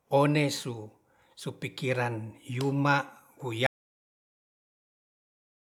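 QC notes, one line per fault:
3.67 s to the end, audio dropout to silence: the input feed was likely lost, through a disconnected device, failed link or accidental mute, while recording carried on writing silence. The speech cuts off mid-flow into total silence, with no room tone, and never returns.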